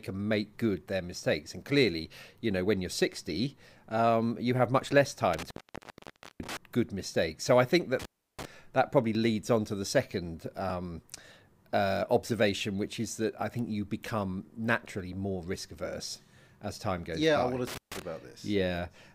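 Intermittent contact breaks the speech at 5.33 s after "you have much less", for about 0.9 s. Again at 7.99 s after "I think", for 0.33 s. Then at 17.67 s, for 0.14 s. A loose connection opens briefly. Each dropout has crackle at its edges.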